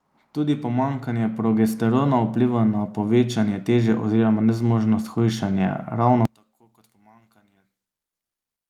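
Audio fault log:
0.17–5.72 s, automatic gain rising: The speech and the room noise behind it climb together by about 11 dB over five and a half seconds. That slow, shared swell is the giveaway. The gain control decided the input was too quiet and kept nudging its gain up, so everything passing through it gets louder at once rather than the talker just leaning in.
6.25–8.70 s, one channel inverted: From here to the end the speech drops away almost entirely, falling by about 36 dB, leaving only a faint residue. The likely cause is one stereo channel flipping polarity. When the channels are summed to mono, the centred voice, which is nearly identical on both sides, cancels itself out, and only the small difference between left and right survives.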